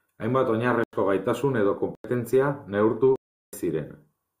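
Speech, cut three times by a block of digital silence. The sound drops out with no fade: at 0.84 s and 1.95 s for 93 ms, and at 3.16 s for 0.37 s. The gaps fit unfilled 4096- and 16384-sample output buffers.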